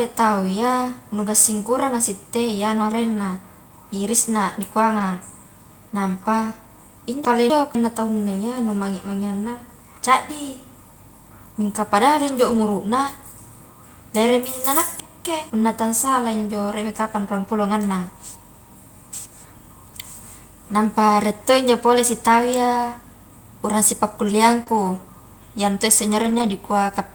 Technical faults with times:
4.99 lost packet rebuilt from error correction
7.25-7.75 chunks out of order
12.49-12.59 lost packet rebuilt from error correction
15.00-15.50 chunks out of order
16.05 lost packet rebuilt from error correction
24.63-24.73 short concealed packet loss
24.66 lost packet rebuilt from error correction
26.22-26.52 lost packet rebuilt from error correction

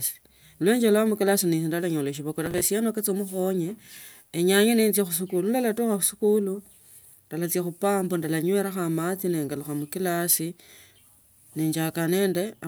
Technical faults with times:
2.46-2.65 processor overload crackle

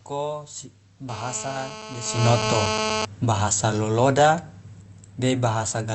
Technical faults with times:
1.09-3.05 GSM phone buzz
3.16-4.33 automatic gain falling

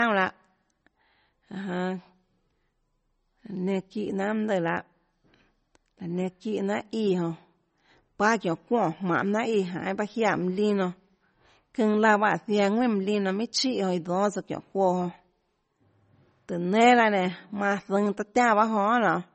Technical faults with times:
0.00-19.35 MP3 compression

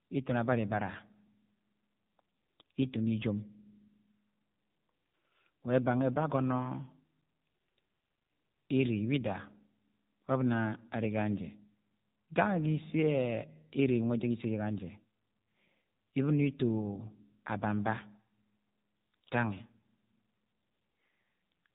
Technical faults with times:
0.00-21.75 AMR narrowband mobile codec

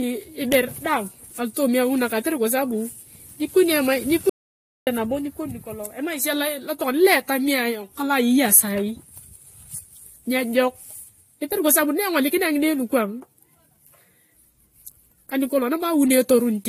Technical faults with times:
0.00-16.69 transcoding between lossy codecs
4.30-4.87 audio dropout to silence

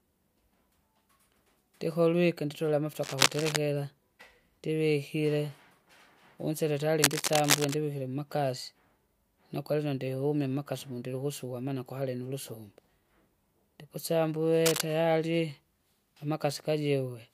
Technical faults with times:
3.01-3.57 cable scratch noise
7.02-7.74 cable scratch noise
14.66-14.82 cable scratch noise

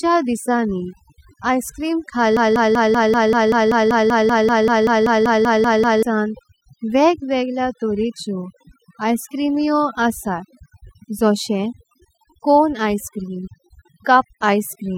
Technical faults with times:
0.00-14.98 overdone noise removal
2.37-6.03 broken-record loop

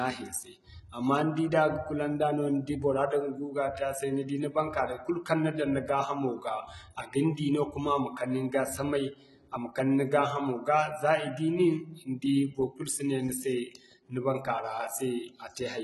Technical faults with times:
0.00-15.84 HE-AAC compression

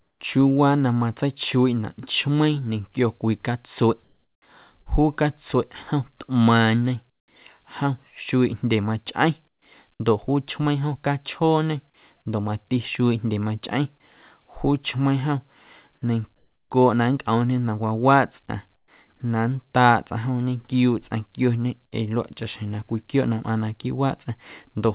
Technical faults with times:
0.00-0.20 comfort noise in place of the background
4.04-4.42 comfort noise in place of the background
4.82-4.88 short concealed packet loss
7.10-7.28 comfort noise in place of the background
9.48-9.62 comfort noise in place of the background
16.36-16.70 comfort noise in place of the background
18.76-18.88 comfort noise in place of the background

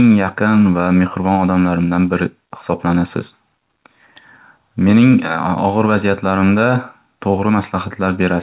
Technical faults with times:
none

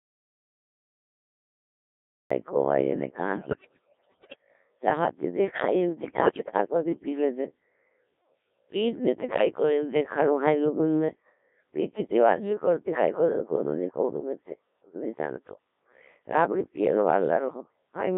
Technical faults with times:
0.00-18.17 Codec 2 vocoder
0.00-2.31 audio dropout to silence
3.33-4.36 bit errors on digital voice radio
6.20-6.58 bit errors on digital voice radio

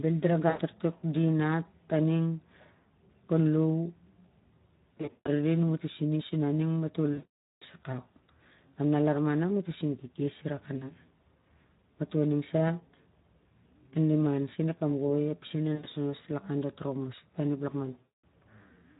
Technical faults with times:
0.00-19.00 Speex codec
0.49-0.62 VoIP packet loss concealed by the speech codec
4.98-5.29 VoIP packet loss concealed by the speech codec
7.13-7.63 VoIP packet loss concealed by the speech codec
10.77-10.92 VoIP packet loss concealed by the speech codec
15.75-15.86 VoIP packet loss concealed by the speech codec
18.02-18.24 VoIP packet loss concealed by the speech codec

